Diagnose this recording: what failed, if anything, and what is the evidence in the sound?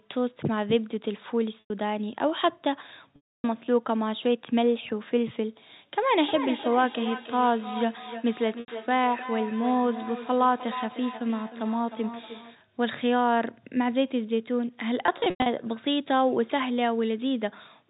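Packet loss with pitch repetition at the network stage. Gaps open at 1.60 s (100 ms), 3.16 s (280 ms), 8.60 s (80 ms) and 15.06 s. The last one loses 200 ms scattered over 400 ms, with its longest run at 100 ms. The receiver bridges each gap by repeating the last pitch period, which fits 20 ms packets. The shorter gaps sound like a briefly held, buzzy tone. The 280 ms gap runs past the roughly 50 ms fade and drops to silence before the sound cross-fades back.

Feedback echo between two devices, an acoustic loop in the call setup. From 5.94 to 12.64 s the speech comes round again about a third of a second later, peaking about 11 dB below the direct sound. Two devices in one room share the call. One plays what the other's microphone sent, and that microphone picks it up again. Each device's echo canceller removes only its own playback, so the repeat survives. The band stops at 4 kHz, from the G.711 telephone coding.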